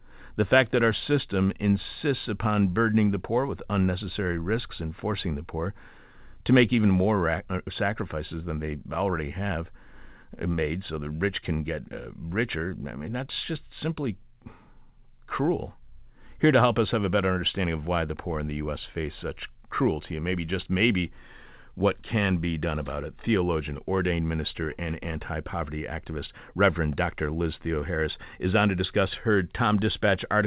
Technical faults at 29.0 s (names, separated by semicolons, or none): none